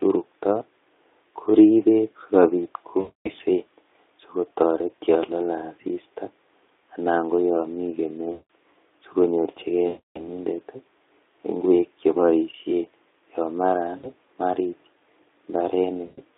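VoIP packet loss concealed by the speech codec hits at 3.00–3.32, 8.31–8.42, 9.87–10.28, 13.97–14.11 and 16.05–16.21 s. Each time, the Speex decoder stretches its last sound into a fading buzzy tone or coloured noise, and the speech stays weak briefly afterward.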